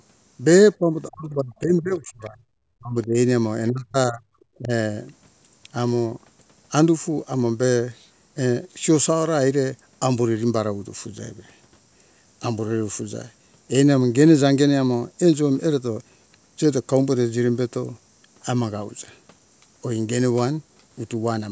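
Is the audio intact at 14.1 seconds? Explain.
Yes, at 14.1 seconds the speech is intact, with no fault at that moment.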